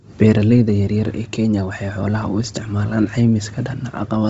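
Throughout the speech, heavy transform-codec damage is audible: nothing reaches above 7.7 kHz, and the upper band sounds breathy and grainy, filled with noise rather than real detail. The cause is likely Bluetooth LC3 compression, which fits a low 24 kbps rate with 7.5 ms frames.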